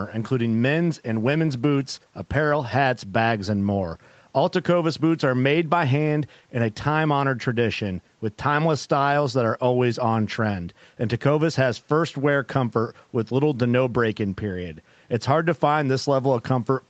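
There are no technical faults to describe in time order in this speech.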